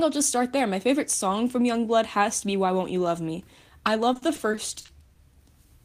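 From 4.13 to 5.18 s, repeated packet loss (robotic sound) breaks the speech into eight gaps, each patched by extending the previous sound. This leaves choppy, robotic audio and short smeared blocks on the spectrogram.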